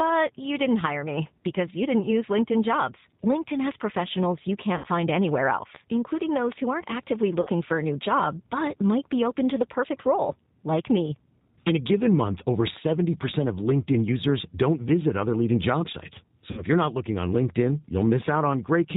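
The whole clip runs through the G.729 codec, and the damage is plainly audible. The sound has that rough, slightly synthetic edge you get when speech is rebuilt from a vocal tract filter, a pitch predictor and a handful of pulses per frame rather than carried as a waveform. Nothing comes through above 4 kHz, so it's dull and boxy. The coding texture fits an 8 kbit/s G.729A stream.

There's VoIP packet loss concealed by the speech codec in three spots, each covering about 60 ms of lost audio, which points to three consecutive packets. The first is at 4.78 to 4.88 s, right after "professionals you". The second is at 7.41 to 7.50 s, between "who aren't actively" and "for a new job". The third is at 16.51 to 16.65 s, just before "you're not looking on". Each time the decoder keeps extrapolating from its last pitch and filter with falling gain, so the speech smears into a fading buzzy tone or coloured noise. 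Because each frame builds on the one before, it takes a moment to firm up once packets arrive again.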